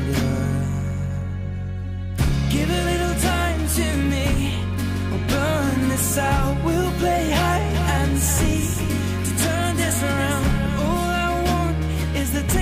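From 7.74 s to 10.98 s there's a doubled audio track: a second full-band copy trails the original by around 400 ms, roughly 10 dB quieter, with no decay or room colour, and it switches on and off abruptly, most likely a slower capture path feeding the same audio in twice.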